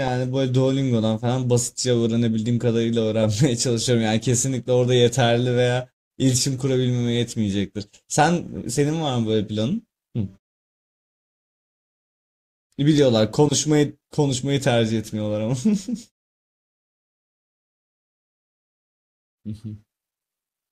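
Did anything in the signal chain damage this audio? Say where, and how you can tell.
No, nothing in the signal chain has damaged this speech. The muted pauses work as intended: the background fades to silence between phrases and comes back in time for the next one, with only very quiet sound lost.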